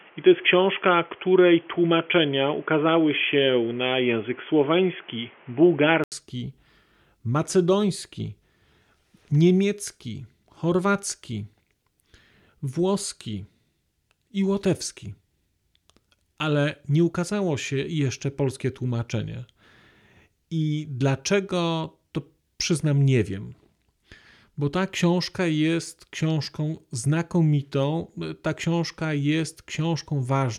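Input switched to a poorer device, 0 to 6.12 s: dull, boxy, with nothing above 3.4 kHz and background noise about 30 dB below the speech, likely from a headset input; an 80 ms gap marks the switch.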